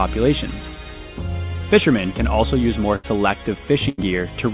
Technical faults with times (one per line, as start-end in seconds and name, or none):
2.96-3.05 burst of packet loss
3.89-4.00 burst of packet loss